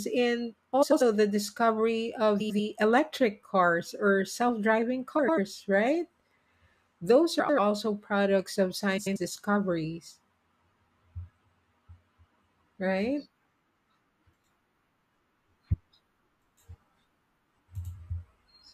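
Six short spots of frames out of order turn up, at 0.82, 2.40 (between "the discovery of" and "electric cars or self"), 5.19, 7.39 (just before "products of"), 8.97 (just after "products of") and 17.50 s. Each time, two adjacent chunks of about 93 ms, which fits runs of roughly four frames, got decoded in swapped order, so a fifth-of-a-second stretch plays back-to-front in halves. You hear a garbled flutter, but nothing goes missing.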